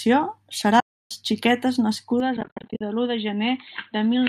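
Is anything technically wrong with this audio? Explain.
Yes, there are two kinds of problem, and they overlap in the second half.

AAC frame loss with muting hits twice. From 0.80 to 1.11 s, about 310 ms of frames goes missing in one block, and from 2.37 to 2.81 s about 290 ms is lost in patches spread over 440 ms, the longest run around 70 ms. The decoder zeroes the missing spectrum and the overlapping windows taper in and out, so you get soft-edged dropouts. The loss rate fits the roughly 10 ms frames of the low-delay AAC stream, which itself sounds lightly coded.

The second is a change of input at 2.20 s that lasts to the end, most likely a switch to a poorer device. There's no gap at the switch, but from there the sound goes dull, with nothing above about 4.3 kHz. The level drops by about 5 dB, and a new noise floor appears roughly 45 dB under the signal. It's a sudden shift in tone and background rather than a gradual one.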